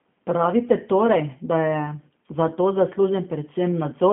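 From start to finish the speech carries G.729 codec damage, plainly audible: a rough, slightly synthetic texture from a model-based rebuild at what sounds like 8 kbit/s, a narrow line band of 150 Hz to 3.4 kHz, and nothing above 3.7 kHz.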